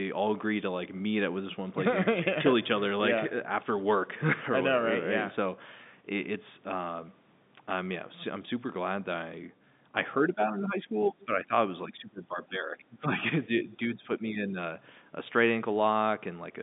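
From 10.27 to 11.53 s, 11.85 to 13.2 s and 13.47 to 14.56 s the speech dips in pieces, by roughly 10, 15 and 10 dB, likely speech suppressed in double talk. The echo canceller mistook the talker for echo. The dips track the overlapping talk, unlike random packet-loss gaps.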